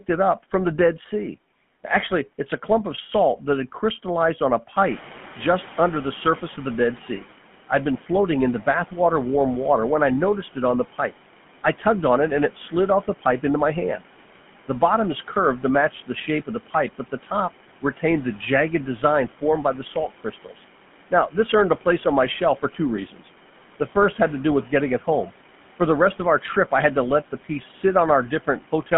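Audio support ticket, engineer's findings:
GSM full-rate codec, whole clip. Speech buzzy and gravelly throughout, plainly audible. Band limited to roughly 150 Hz to 3.4 kHz, nothing above. Consistent with a 13 kbps GSM full-rate path. Codec models the vocal tract and excites it with a sparse, regular pulse train. Excitation detail is thrown away. Result is the rough, grainy texture on every voiced stretch.

Noise suppressor catching up, 4.76 to 7.24 s. Room noise jumps by about 16 dB around 5 s. Noise passes at first with little reduction. Then it sinks by about 9 dB over 2.48 s. Suppressor's noise estimate lags the sudden rise and only converges by 7.24 s. The background settles about 20 dB below speech.

Speech cut by the noise suppressor, 7.98 to 8.09 s, 19.95 to 20.54 s, 23.12 to 23.26 s. Speech briefly swallowed, dropping about 8, 8 and 10 dB. Each cut lasts around a tenth of a second or a little more. 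Suppressor classifies soft speech as noise and attenuates it along with the background. Quiet consonants and endings go faint.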